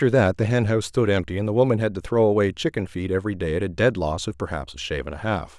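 No technical faults can be heard anywhere in this recording.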